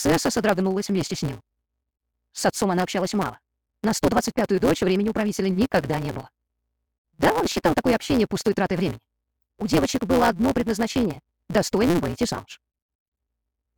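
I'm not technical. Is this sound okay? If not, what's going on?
No. All the way through, there's a steady buzz at about 172 Hz and the sound runs nearly twice as fast. That's a block size mismatch (truncated): chunks get cut short.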